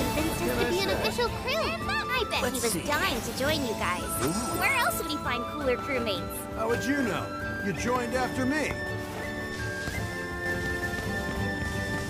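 A second, slower capture path or an edit holding two out-of-step copies likely caused the doubled audio track that begins abruptly at 10.46 s. From there to the end, a dry, full-band copy trails the original by roughly 300 ms at about equal level, smearing every event into a distinct echo.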